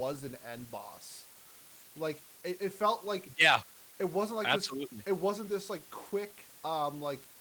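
From start to finish the speech carries a constant, even hiss: low bit depth with dither. The audio has been reduced to about 7 bits, with dither noise added before rounding, so the rounding error becomes steady white noise rather than distortion, sitting roughly 20 dB below the speech. On a spectrogram it shows as a flat grey wash across all frequencies that fills the pauses, and the waveform never settles to a clean zero line.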